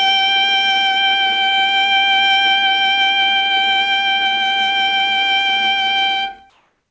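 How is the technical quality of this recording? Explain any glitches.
The music runs through a call-style path with nothing above 8 kHz, which fits a wideband codec like G.722, and there's one glitch right at the tail. From 6.50 s to the end at 6.90 s, about 0.41 s, the real background gives way to a flat, featureless hiss at the same level. That's likely comfort noise in place of the background: the sender's detector took the quiet as a pause and stopped transmitting, so the receiver filled in synthetic noise.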